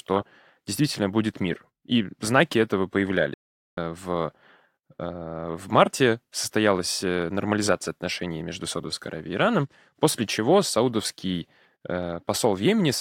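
Speech cuts out abruptly just after "знаки этого": from 3.34 s to 3.77 s the output drops to complete silence for about 435 ms before the sound picks up again. That mid-flow gap is a playback stall. The likely cause is the player running out of buffered data or having its audio thread blocked, so nothing reached the output until it recovered and carried on.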